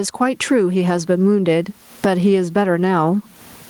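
Speech with gain pumping throughout: the faint room noise, about 45 dB below the voice, swells by around 20 dB in pauses and ducks under loud syllables, likely from excessive input gain and a fast limiter. Unlike a noise gate, the background rises in gaps rather than cutting out.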